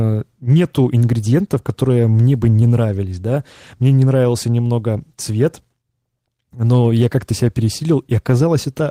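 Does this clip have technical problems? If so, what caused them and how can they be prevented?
Yes. Clock drift between sender and receiver runs through the whole clip: the sender's clock runs roughly 4 percent fast, so the receiver's jitter buffer keeps overfilling. Locking both ends to a common clock, or using adaptive resampling at the receiver, prevents this.

Repeated timing corrections occur from 0.03 s to 8.48 s. The receiver keeps dropping short pieces to match the 104 percent rate, producing uneven small hiccups. Smooth resampling instead of cut-based correction avoids these audible edits.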